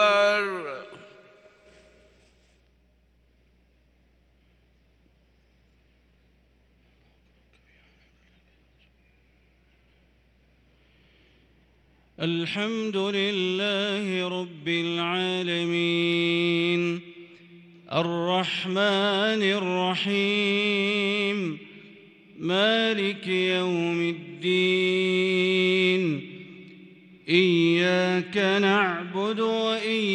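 No technical faults can be heard anywhere in the audio.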